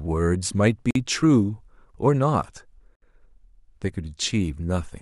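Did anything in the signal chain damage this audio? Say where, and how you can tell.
Yes, at the codec stage. There's a gap at a join of encoded pieces at 0.91–0.95 s (47 ms) and again at 2.95–3.02 s (67 ms), two seconds apart. The speech drops to silence with smeared edges and picks up where it stopped, because each piece kept its encoder start delay and end padding.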